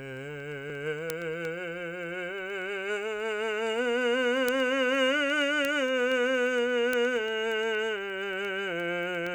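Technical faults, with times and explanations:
0.17 to 9.27 s, word clock ticks: some seventy sharp, uneven ticks recur about every tenth of a second as an unlocked receiver clock, off by around 200 ppm, drops or repeats one sample per slip. Unlike dropouts, the music never gaps and the rate stays steady.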